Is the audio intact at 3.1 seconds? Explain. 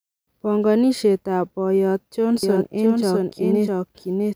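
No. At 3.1 seconds the speech carries a doubled audio track, which starts abruptly at 2.43 s, just after "ab boyot", and runs to the end. A second full-band copy trails the original by around 0.7 s at about 5 dB lower, so two out-of-step versions overlap. The likely cause is a slower second capture path mixed back in. Unlike an echo or reverb, the copy is dry, with no decay and no room colour.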